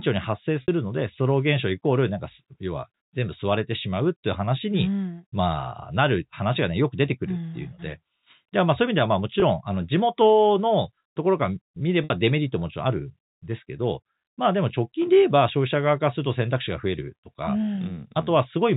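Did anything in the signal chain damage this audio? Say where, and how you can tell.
Yes, at the network stage: packet loss with pitch repetition. The receiver filled the gaps at 0.62–0.68 s and 12.04–12.10 s (60 ms each, fitting three 20 ms packets) and 9.40–9.42 s (20 ms) by repeating the last pitch period, so the speech briefly holds a buzzy, sustained tone.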